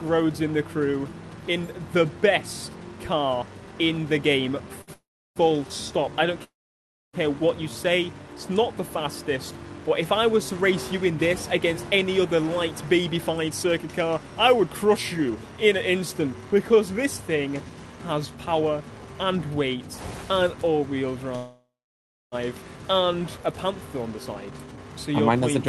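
A short stall from a late packet comes first, at 4.81 to 4.91 s: the jitter buffer ran dry and the receiver held the last sound for 61 ms, so nothing is lost but it lingers.

Call audio freezes follow at 4.94 to 5.39 s, 6.44 to 7.16 s and 21.36 to 22.35 s, each likely caused by packets held up in transit. The receiver extends the last sound briefly, then goes silent for about 0.34 s, 0.63 s and 0.64 s respectively, before resuming where it stopped.

Jitter buffer speed-up runs from 12.71 to 19.08 s at 111% and from 24.07 to 25.65 s at 113%. Here the receiver trimmed pitch-period slices to shed excess delay, removing roughly 0.7 s and 0.2 s, so the sound runs hurried at unchanged pitch.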